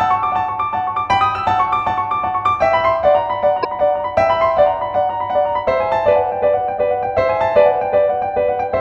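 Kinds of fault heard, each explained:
Damaged data in a compressed stream: a short disturbance at 3.63 to 3.65 s, lasting about 26 ms. Corrupted bytes there make the decoder misread the affected frames, lose sync, and hunt for the next valid frame header before playback steadies.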